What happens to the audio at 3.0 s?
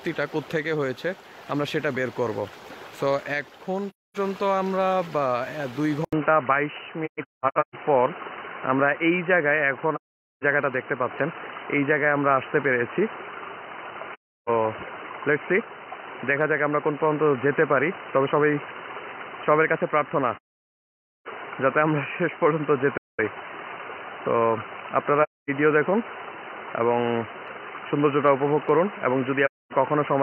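Nothing goes wrong at 3.0 s; the audio plays through that moment intact, with no dropout, click or other disturbance.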